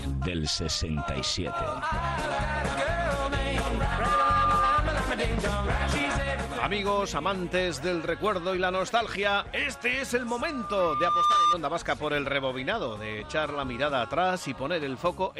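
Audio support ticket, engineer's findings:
Loudspeaker feedback squeal, 3.87–4.83 s: 1.2 kHz tone swells over a fraction of a second to about 5 dB above programme. Mic picking up its own PA, loop gain above unity at 1.2 kHz. Spectrogram shows a thin horizontal line.

Same squeal, 10.19–11.58 s: same 1.2 kHz, slower swell of about a second, peaks about 10 dB over programme. Waveform envelope ramps up. Same acoustic loop, so reduce gain or notch 1.2 kHz.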